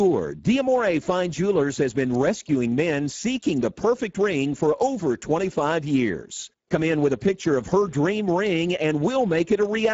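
Speech, with Speex codec damage throughout. The low bitrate, likely around 10 kbps, leaves the voice hoarse and noisy. Nothing remains above 7.7 kHz.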